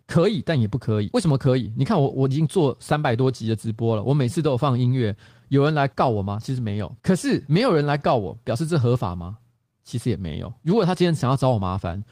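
Throughout the speech, clock drift between sender and receiver is audible: the sender's clock runs about 4 percent slow, so the receiver's jitter buffer keeps draining. Unlike random network jitter, the timing slips always lean the same way, toward the audio lagging.

From 0.21 s to 11.97 s come repeated timing corrections: the receiver keeps stretching short pieces to stay in step, playing at 97 percent speed and adding roughly 0.4 s overall. These are small hiccups and a faintly dragging tempo, not the silent gaps of packet loss.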